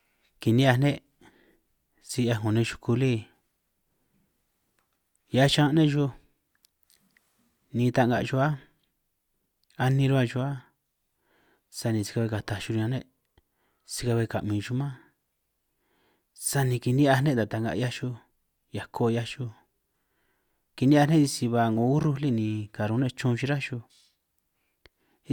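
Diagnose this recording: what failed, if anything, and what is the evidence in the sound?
Nothing failed; no stage shows any audible fault.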